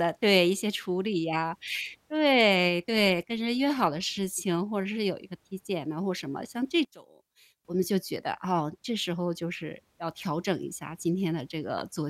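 From 6.85 to 7.65 s, one stereo channel was likely flipped in polarity, giving one channel inverted. When the channels are summed, the centred speech cancels against itself, dropping about 22 dB and leaving only a faint residue of the difference between channels.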